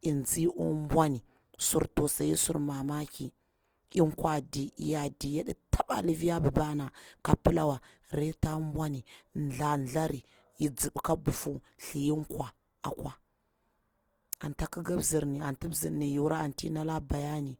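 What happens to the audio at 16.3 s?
At 16.3 s you're hearing the same Opus compression that runs through the whole clip. The speech sounds grainy and rough, with noise filling bands where bits ran short. It likely comes from the music (CELT) mode at a low rate, something like 24 kbps.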